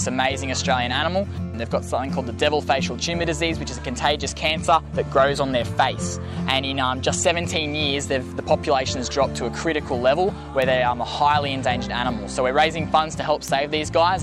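From 0.62 s to 14.19 s, word clock ticks sound at a steady rate of roughly one every 0.7 s, about twenty in all. The receiving device is running on its own clock instead of locking to the incoming digital stream, and the two rates disagree by something like 30 ppm. Each time they slip, a single sample is dropped or repeated, giving a sharp click of uneven strength. A spectrogram shows thin, evenly spaced vertical lines spanning the full band, and the waveform shows tiny one-sample discontinuities at each tick.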